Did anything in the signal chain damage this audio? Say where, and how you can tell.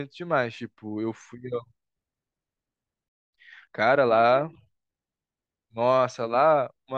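Yes, at the playback stage. A playback stall cuts the speech off at 3.09 s and leaves silence until 3.33 s, about 0.24 s. The player was likely starved of buffered data or had its output thread blocked, so nothing reached the output until it recovered.

Time-compressed catch-up follows from 3.33 to 4.95 s. The speech runs about 1.15 times fast with its pitch unchanged. The player is working off the backlog from the stall by removing short segments and cross-fading the joins.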